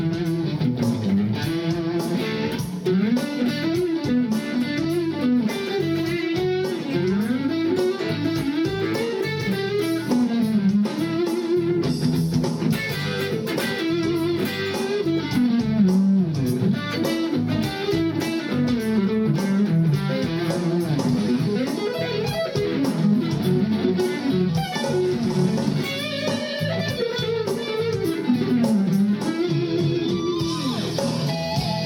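No technical faults can be heard anywhere in this recording.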